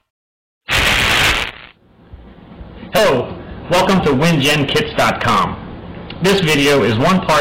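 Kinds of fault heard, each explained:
Hard clipping: Every loud moment carries a harsh, gritty fuzz rather than occasional crackle, and it lasts the whole clip. The signal is driven about 21 dB beyond what some stage in the chain can pass, so the peaks are sliced flat. Roughly one sample in seven sits pressed against that ceiling. Those squared-off tops throw extra harmonics high into the spectrum, which is where the buzzy edge on the sound comes from.
Damaged data in a compressed stream: A brief disturbance cuts across the sound from about 2.94 to 2.99 s, lasting roughly 44 ms. Part of the encoded stream there is corrupt. The decoder misreads those frames and loses its place, so playback is briefly disrupted until it locks onto the next valid frame header and resumes normal playback.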